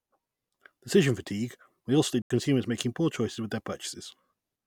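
At 2.22 s the speech drops into a block of digital silence lasting about 85 ms, ending at 2.30 s, which fits a 4096-sample buffer left unfilled. The sound cuts out and back with no fade; the waveform shows a flat line, the spectrogram a blank vertical gap.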